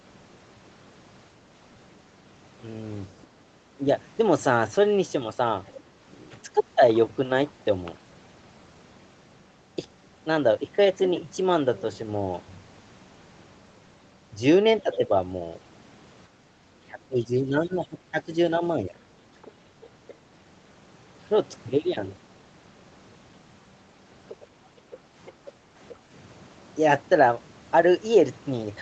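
From 3.78 to 6.8 s, with both sides likely talking at once, the echo canceller could not tell the talker from the loudspeaker echo and turned both down. This is speech suppressed in double talk: the voice dips briefly, by roughly 10 dB, for about a tenth of a second in total.

At 14.81 to 14.97 s, the canceller likely left some loudspeaker sound in the microphone signal, so the other side's voice leaks through as a faint scrap roughly 20 dB below the talker. At the same moment, from 14.83 to 18.95 s, a second stretch of double-talk suppression begins. Here the canceller again likely mistook the talker for echo, and the voice sinks by up to roughly 15 dB, for about one and a half seconds in total across the stretch.

From 16.46 to 16.61 s, the canceller clamped the microphone while the loudspeaker played. This background gating by the echo canceller makes the room sound dip by 6 dB for about 0.15 s before recovering.

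From 24.29 to 25.93 s, the other side's voice leaks through again, likely because the echo was not fully cancelled. It sits roughly 20 dB under the speech. Within that stretch, between 24.9 and 25.75 s, the canceller gates the background again, dropping the room sound by 6 dB for about 0.15 s in total.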